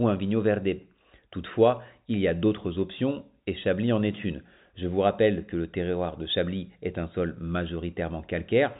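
Nothing goes wrong anywhere in this speech; it just has the narrow, phone-line character of G.711 telephone coding, with the top end stopping at 3.8 kHz.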